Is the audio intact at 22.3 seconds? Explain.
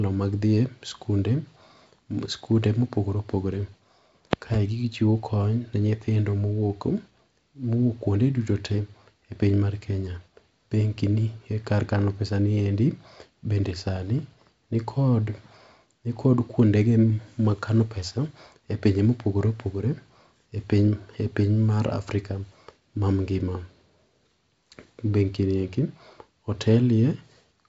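Yes, the audio is intact at 22.3 seconds, with the speech carried cleanly through G.722 wideband telephone coding and nothing to be heard above about 7.7 kHz.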